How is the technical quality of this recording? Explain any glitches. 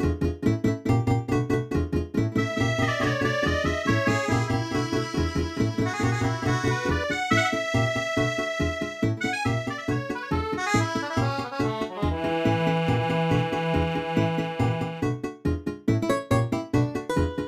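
The recording has one clear glitch in its first part. From the start to 7.04 s, there is a doubled audio track. A second, full-band copy trails about 200 ms behind, at roughly equal level. It likely comes from a slower capture path recording the sound again. The echo has no decay or room colour, and it stops abruptly at 7.04 s.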